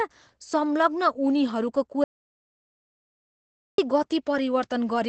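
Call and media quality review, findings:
Opus voice compression, throughout: speech muffled, slightly hoarse and robotic. The codec runs in SILK mode at 12 kbps, wideband, with coarse excitation coding. On the spectrogram there is a hard ceiling near 8.4 kHz, an empty band above it, and smeared harmonics.

Audio dropout to silence, 2.04–3.78 s (1.74 s): speech cuts off mid-flow and resumes abruptly. The gap is silent with no room tone. On the waveform it is a dead flat line, and on the spectrogram a blank column. Cause is likely input lost upstream while the encoder kept writing silence.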